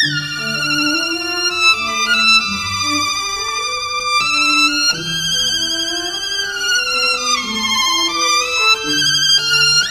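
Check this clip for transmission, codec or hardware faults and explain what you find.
One fault runs through the whole clip: the audio is read two samples at a time (double speed). The reader treats each pair of samples as a single frame, as if expecting two channels or samples twice as wide. Playback therefore runs at 2.0 times speed and an octave high.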